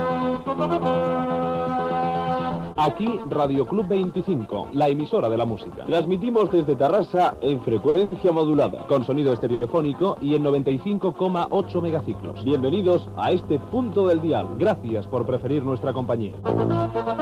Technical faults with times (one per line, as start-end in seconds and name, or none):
7.89-8.13 short stall from a late packet
9.54-9.63 short stall from a late packet
11.62-16.67 mains hum